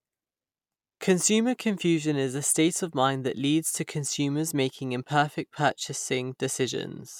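No faults are audible anywhere in the recording; the speech runs without dropouts, clicks, distortion or timing breaks.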